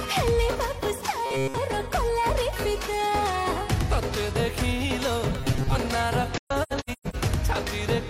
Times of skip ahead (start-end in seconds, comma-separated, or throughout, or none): none